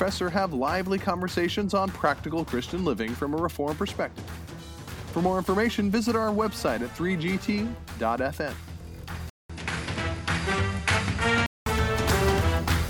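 At 9.30 s the audio drops out for about 0.2 s, then returns duller, with nothing above 11.4 kHz, a faint new noise floor and an unchanged level, until 11.66 s. This is likely an input switched to a poorer device, a narrower-band microphone with its own tone and noise.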